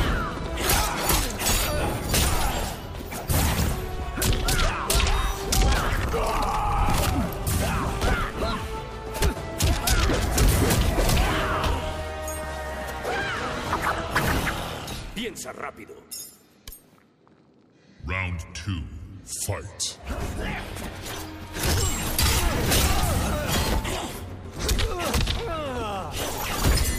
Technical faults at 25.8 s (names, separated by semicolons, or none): none